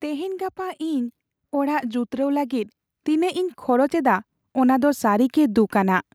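From 0.05 s to 6.07 s, automatic gain rising is heard across the speech. The gain control treated the input as too quiet and kept lifting its level. Everything grows louder by about 10 dB. The voice and the background swell together, slowly and steadily.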